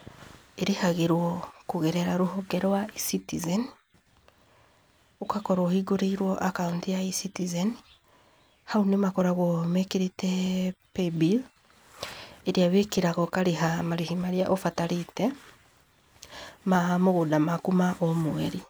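A speech recording carries a regular click every 1.26 s from 0.41 s to 18.01 s, around fifteen in all, each a brief discontinuity in the waveform. The steady spacing points to clock drift buffer slips, likely between two devices running on independent clocks. A mismatch on the order of 300 ppm lets the intervening buffer creep until a small block, roughly 15 samples, is dropped or repeated, and each such splice is heard as the click.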